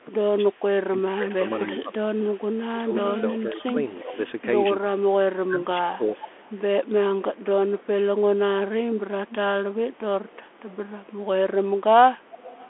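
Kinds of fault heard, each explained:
Bluetooth CVSD headset codec: The whole clip is confined to a narrow telephone band, roughly 250 Hz to 3.4 kHz, with nothing above 3.8 kHz, which fits a one-bit-per-sample delta coder running at 64 kHz. Its adaptive step cannot keep up with loud, bright sounds, so sibilants turn scratchy and a granular hiss sits under the speech. On a spectrogram there is a hard ceiling near 3.8 kHz, empty above, and a grainy noise floor between phrases.
Speech suppressed in double talk: The speech level sags from 0.08 to 4.16 s, falling by as much as about 30 dB, with around two seconds of that stretch affected. A milder dip follows from 5.5 to 6.37 s, about 15 dB deep. The likely cause is an echo canceller turning the near talker down while both ends speak at once. On the waveform these show as sudden troughs in the envelope, and the spectrogram thins out in the same places.
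Echo leak: A faint, delayed copy of the speech trails the original by 356 ms, heard from 1.47 to 4.31 s, 6.16 to 7.83 s, 9.29 to 10.74 s and 12.33 to 12.68 s. It sits roughly 10 to 20 dB below the direct sound. Residual loudspeaker pickup that an echo canceller failed to remove is the likely source. On a spectrogram it appears as a weaker ghost of each phrase, shifted right by about 0.36 s.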